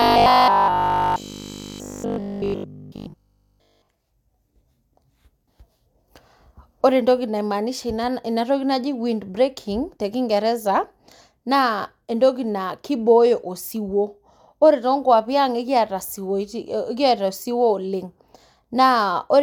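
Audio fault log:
0.02–3.88 s, robotic sound from repeated short buffers: the speech becomes a rigid metallic buzz fixed at 50 Hz, still loosely tracking the words. This is likely caused by repeated 20 ms buffers replayed in place of nearly all fresh audio. Unlike mains hum, the buzz replaces the speech rather than sitting beneath it.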